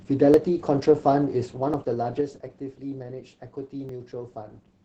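Opus voice compression runs through the whole speech clip. The damage is heavy. The band stops near 8 kHz, and the coarse SILK coding leaves the speech muffled, hoarse and slightly robotic. That fits a low bitrate of about 10 kbps.

At 0.34 s there is a small jump forward in the speech. This is likely a dropped buffer (overrun). Roughly 15 ms of samples were overwritten before being read. The two sides meet directly, with no gap of silence. The same skip recurs at 1.74 s, again losing about 15 ms. At 3.89 s there is a briefer jump of about 5 ms.

From 1.26 s to 2.78 s, zipper noise rides on the speech. The level falls by about 10 dB in unsmoothed steps of about 3 dB. The steps come about three times a second. Each one leaves a small click, so the fade ticks rather than glides.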